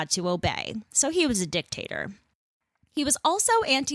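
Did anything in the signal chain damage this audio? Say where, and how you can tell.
No, nothing along the chain seems to have harmed this bit of speech, and I can't point to any stage where the signal picked up damage.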